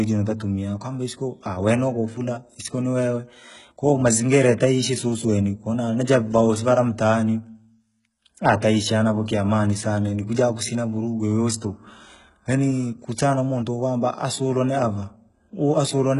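Speech throughout, with heavy HE-AAC compression damage across the whole clip. Content stops at about 11.1 kHz, and the treble beneath that sounds synthetic and gritty, with s sounds turning metallic. This is likely spectral band replication rebuilding the highs at a bitrate of roughly 12 kbps.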